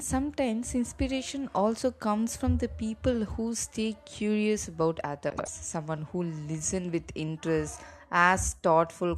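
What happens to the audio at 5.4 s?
Two neighbouring runs of frames, each about 78 ms long (which fits roughly three frames apiece), arrived frames out of order and were decoded as received, between 5.30 and 5.48 s. That stretch of speech plays with its halves swapped, giving a garbled flutter, though no time is lost.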